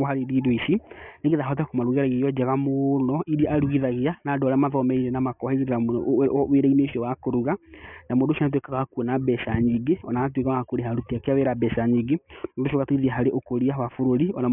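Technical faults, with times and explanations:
Throughout, aliasing: the speech was downsampled without filtering first, so content above 3 kHz folds back beneath that edge as unrelated, inharmonic tones around 25 dB below the speech, turning sibilants gritty and metallic; the hard band edge at 3 kHz fits a 6 kHz sample rate.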